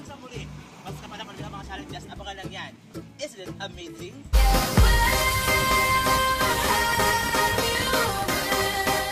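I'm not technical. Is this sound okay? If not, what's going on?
No. There is clock drift between sender and receiver: the sending device's clock runs a few percent faster than the receiving one's, so the two gradually fall out of step.

From 0.05 to 6.25 s there are repeated timing corrections. The receiver keeps trimming tiny pieces to catch up, running about 3% fast with slight, uneven hiccups.

From 6.74 s to the end there is a train of clicks, about 12 per second at irregular spacing, ticking over the sound. It is likely caused by electrical interference or a faulty connection or power supply.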